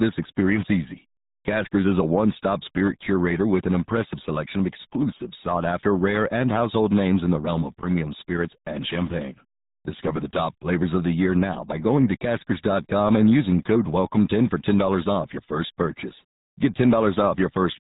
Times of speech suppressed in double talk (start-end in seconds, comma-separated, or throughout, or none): none